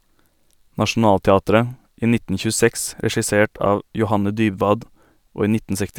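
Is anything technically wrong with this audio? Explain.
No, nothing is technically wrong with this speech recording. There is no fault to point to anywhere in it.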